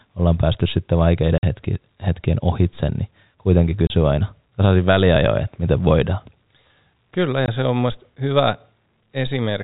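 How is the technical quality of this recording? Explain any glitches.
The recording has three short dropouts from packet loss filled with silence, heard over a telephone-band G.711 signal that cuts off at 4 kHz. The gaps fall at 1.38 to 1.43 s, 3.87 to 3.90 s, and 7.46 to 7.48 s. They last 50, 30 and 20 ms. All three are multiples of 10 ms, which fits 10 ms packets. When packets fail to arrive, the receiver plays pure silence in their place. The speech stops abruptly and restarts at hard edges.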